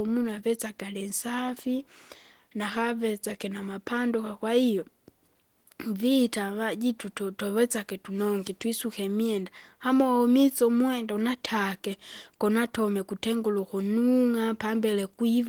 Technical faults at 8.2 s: none

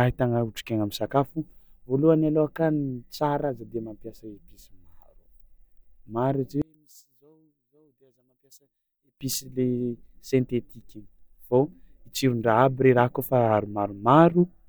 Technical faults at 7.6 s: one channel inverted

